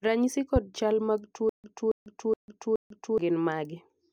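At 0.56 to 0.59 s a single loud pop, about 10 dB above the speech, sits on top of it while the speech carries on underneath, likely a voltage spike from a plug, switch or static. From 1.49 to 3.18 s there is a stutter with silent gaps: the same 0.28 s fragment repeats four times, each followed by 0.15 s of dead digital silence, likely a stalled stream replaying its last buffer. Unlike a plain dropout, the repetition is regular, and the speech that should fill that span never arrives.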